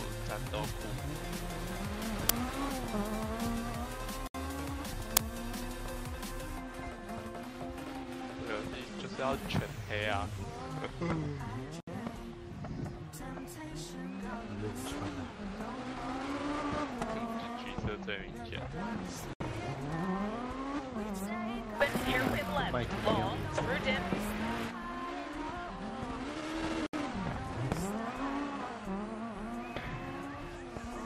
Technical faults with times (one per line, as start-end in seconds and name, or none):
2.29 uninitialised buffer
5.17 uninitialised buffer